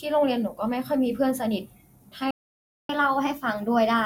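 At 2.31 s the player most likely ran out of buffered data or had its output thread blocked, and the result is a playback stall. The speech cuts off mid-flow and the output stays completely silent for 584 ms, until 2.89 s. It then resumes, leaving an abrupt, unnatural gap that breaks the rhythm of the phrase.

From 2.89 s to the end of the clip, the player works off the backlog that built up during the gap. It resamples the delayed audio and plays it back 1.1 times faster than normal. This is catch-up at higher speed. Because resampling changes speed and pitch together, the speech sounds hurried and is raised by roughly one and a half semitones. That gives it a slight upward lift while the lost time is being recovered.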